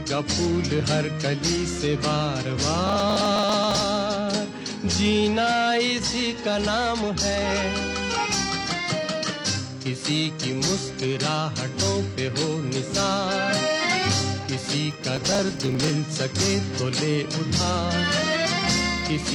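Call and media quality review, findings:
Processor overload crackle, 2.87–3.80 s and 14.91–15.90 s: gritty tearing from dozens of skipped sub-millisecond buffers, not the longer clean gaps of packet loss; clears once the CPU load passes.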